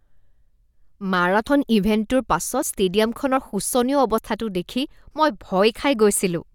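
The speech skips ahead abruptly five times, at 1.47, 2.62, 3.37, 4.18 and 5.80 s. Each jump is most likely a dropped buffer (overrun): the samples were overwritten before being read, so the audio on either side is spliced with no gap. The longest loss, at 2.62 s, removes about 70 ms, and the others are shorter, about 20 to 40 ms. A waveform shows an abrupt discontinuity at each point, and a spectrogram shows a thin vertical broadband line.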